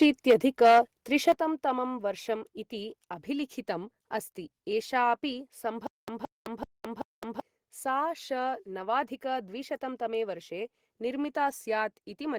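From 0.01 to 0.8 s the loudest syllables carry a harsh, crackling edge: microphone overload, with peaks about 7 dB past the converter's limit and roughly one sample in twenty flattened. The likely cause is input gain set too high for the converter. It sounds torn rather than squashed, unlike a limiter.

At 0.31 s voice and background fall together by about 4 dB in a single step, not a gradual ride. This is the microphone volume stepped down, likely software cutting device gain in reaction to the distortion.

The pattern repeats. Microphone overload returns from 1.27 to 1.32 s, about 3 dB over with roughly a tenth of samples clipped. At 1.32 s the level drops again in one step, this time by about 7 dB.

From 5.87 to 7.40 s comes a stutter with silent gaps. A 170 ms fragment plays four times, each followed by 213 ms of dead digital silence, repeating every 383 ms. This likely comes from a stalled stream replaying its last buffer on each retry. 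The even rhythm and true silence set it apart from a single dropout or a gapless loop, and the sound that belonged in that span is gone.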